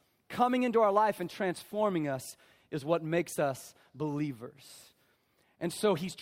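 Listening closely to the speech, nothing stood out as a technical problem at any point.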